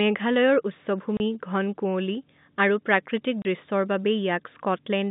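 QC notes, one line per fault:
1.17–1.20 s and 3.42–3.45 s, packet loss filled with silence: two 30 ms holes, each the length of one lost packet, drop the speech to silence with hard edges. The waveform shows flat gaps with abrupt walls, and the telephone-band spectrogram shows vertical blank stripes.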